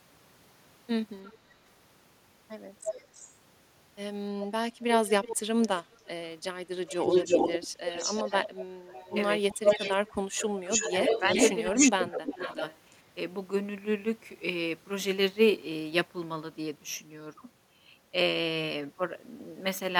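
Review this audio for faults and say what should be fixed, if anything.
An echo leak runs through the speech at 1.24–1.38 s, 2.85–3.26 s, 4.93–9.96 s and 10.68–12.78 s. A delayed copy of the voice returns about 330 to 365 ms after the original. At first it is very faint, then nearly as loud, and from 4.93 s it is about as loud as the speech itself. The likely cause is a far-end loudspeaker whose echo canceller lets part of its microphone pickup through. A separate repeat at a fixed delay distinguishes it from room reverberation, which smears into a tail. Prevent it with a headset or better-tuned echo cancellation at the loudspeaker end.

Speech suppressed in double talk occurs at 9.13–11.11 s and 11.69–12.37 s, overlapping the loud echo passages. The talker's level dips, by as much as about 20 dB in the first stretch and about 15 dB in the second, totalling roughly 0.7 s and 0.5 s. This is likely the echo canceller, unable to separate talker from echo, turning both down. 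Unlike packet-loss dropouts, the dips coincide with the overlapping echo. Prevent it with echo cancellation that handles double talk without heavy suppression.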